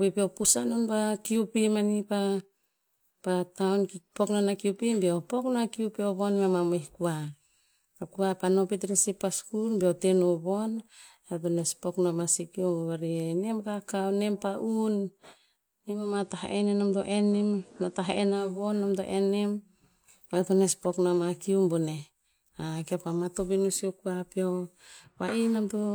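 At 15.82 s the receiver lost its digital stream and made a digital radio blend to analogue, cross-fading over 423 ms to the station's FM broadcast. Faint hiss appears, and the level holds steady until the return at 18.70 s, just before "nom to en nem".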